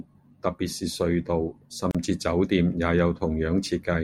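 At 1.91 s the speech drops out for about 36 ms, then resumes where it stopped: a gap at a join of encoded pieces, left untrimmed.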